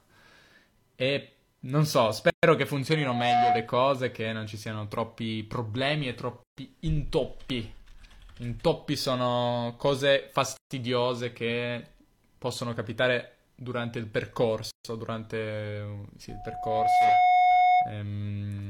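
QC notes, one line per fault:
2.30–2.43, 6.43–6.57, 10.57–10.71, 14.71–14.85 s: gap at a join of encoded pieces. The speech was encoded in separate chunks and joined without trimming, so each join keeps one encoder's start-up delay and the previous chunk's padded last frame. The result is a silence of about 130 to 140 ms that cuts into continuous speech every 4.0 s. Its edges are smeared by the codec, and the speech resumes exactly where it stopped.
2.94–3.76 s and 16.29–18.00 s: loudspeaker feedback squeal. A microphone is picking up the loudspeaker it feeds, and at 727 Hz the loop gain exceeds one, so that frequency keeps reinforcing itself. A single 727 Hz tone swells over the speech. The first squeal builds in roughly 0.4 s to about 5 dB above the speech. The second builds more slowly, over roughly 0.7 s, to about 10 dB above the speech.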